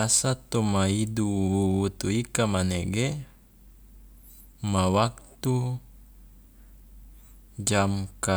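Nothing in this short bit of speech trips any alarms, so there's no fault to point to at any moment along the way.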